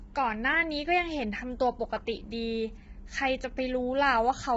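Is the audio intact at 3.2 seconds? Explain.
No. At 3.2 seconds, as throughout the speech, the sound is rough and grainy, with noise filling the gaps between harmonics and nothing above 7.7 kHz. This is likely heavy low-delay AAC compression: AAC-ELD at a starved rate near 16 kbps has too few bits for its roughly 500 frequency lines per frame, leaving noise between the harmonics.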